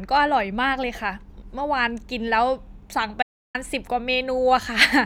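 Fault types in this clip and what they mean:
Audio dropout to silence: the input signal was likely lost for 0.32 s while recording carried on writing zeros, so the speech cuts off abruptly at 3.23 s and resumes at 3.55 s. The gap is total silence without room tone.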